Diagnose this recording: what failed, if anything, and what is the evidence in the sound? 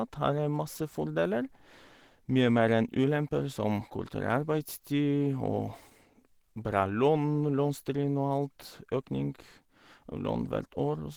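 The codec stage failed, and it affects the whole speech recording. The sound is muffled and hoarse, with a grainy, noisy roughness throughout. The top end still reaches about 20.3 kHz, and there are fewer of the swirly spectral holes you'd get from MP3. That combination points to Opus compression, likely running in its hybrid mode. A speech-style core handles the lower band, and the upper bands are rebuilt coarsely from their energy alone, which fits a very low rate of around 16 kbps.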